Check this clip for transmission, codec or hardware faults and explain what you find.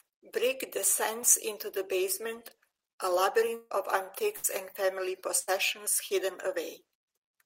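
Three network faults are audible, all on the transmission side.

Long network dropout, 3.55 to 3.72 s, right after "into the basement a": the last sound is stretched into a fading buzz for about 150 ms, then about 20 ms of silence, and speech resumes with roughly 160 ms lost. The likely cause is audio ceasing to arrive. That drop to silence sets it apart from the shorter bursts.

Burst of packet loss, at 4.36 to 4.46 s and 5.39 to 5.49 s: each time about 80 ms of speech never arrives, and the receiver covers the gap with a decaying continuation of the preceding sound (about 72 and 88 ms). Unlike the dropout, the fill lasts through each gap without reaching silence.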